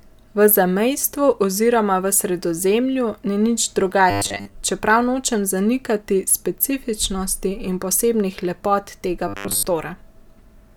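Speech, with two bursts of robotic sound from repeated short buffers. The first runs from 4.11 to 4.57 s, the second from 9.28 to 9.65 s. Both times the speech becomes a rigid, metallic buzz pitched at 100 Hz. Only its rough outline survives. The likely cause is audio arriving too seldom, so the same 10 ms slice gets replayed. Most of each stretch is repeated material, with the real audio skipped.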